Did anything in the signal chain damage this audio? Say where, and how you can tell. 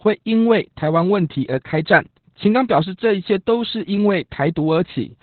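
Yes, at the codec stage: Opus voice compression across the whole clip. Nothing survives above 4.3 kHz, and the speech sounds muffled, hoarse and faintly robotic, which fits SILK narrowband coding at about 8 kbps. A plain low-pass would dull the sound without that coarse, buzzy excitation.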